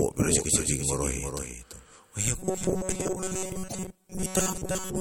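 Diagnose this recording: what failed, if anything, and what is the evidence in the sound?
Throughout the recording, the capture or routing path is likely feeding the same signal in twice, with the second copy arriving through a slower route. This is a doubled audio track. Every syllable of the speech is followed by a full-band repeat about 0.3 s later and about 5 dB quieter. The repeat is a clean duplicate with no decay or room colouring, so it sounds like a stuttering echo rather than reverberation.

From 2.38 s to the end, the driver or buffer stage is starving. New audio arrives too seldom, so the software keeps replaying its last short block and discards most of the real signal. This produces robotic sound from repeated short buffers. The speech collapses into a rigid metallic buzz at 188 Hz, which points to a repeated block of roughly 5.3 ms. The buzz still loosely tracks the shape of the speech.

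From 3.67 s to 3.75 s, the codec stage is failing. MP3 frames appear to have been cut out of the stream, and the frames that follow likely reach back into the bit reservoir for data that is no longer there. This is a broken MP3 bit reservoir. The audio jumps forward, and the 80 ms span covers about three frames of 26.1 ms each.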